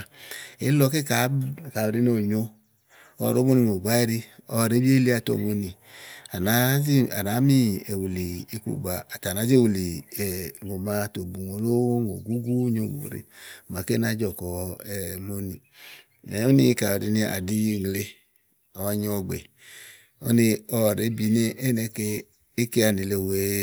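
Nothing in the recording stood out as a technical problem on listening.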